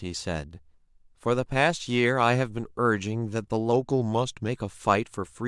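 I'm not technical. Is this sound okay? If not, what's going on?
No. Between about 3.72 and 4.49 seconds, there's what sounds like a drift correction step: software keeping two clocks in sync has likely nudged the playback rate in a single jump to rebalance its buffer. The speech slows by about 6 percent and drops roughly a semitone lower in pitch for that stretch, sounding briefly sluggish and flat, then snaps back to normal speed and pitch.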